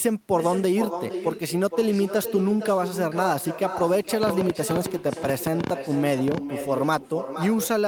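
A quieter, thinner copy of every phrase trails the speech throughout, arriving about half a second late and sitting about 9 dB below it. This is echo with no canceller: the far end's loudspeaker feeds its microphone, and nothing strips that returning signal before it travels back.

From 4.23 to 6.38 s, a train of clicks ticks over the speech and the gaps between phrases. There are around twenty similar pops, roughly 8.9 per second at an uneven pace, each standing well above the speech. The likely cause is interference from nearby equipment or a faulty connection or power supply injecting repeated pulses.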